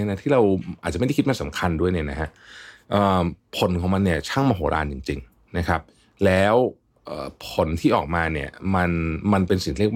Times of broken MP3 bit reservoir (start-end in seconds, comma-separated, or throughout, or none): none